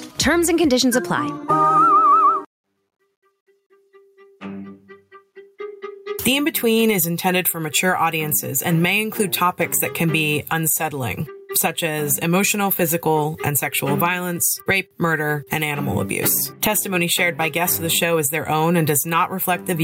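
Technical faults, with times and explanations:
Throughout: gain pumping; the gain swings about 25 dB, likely a fast limiter fighting excessive input gain.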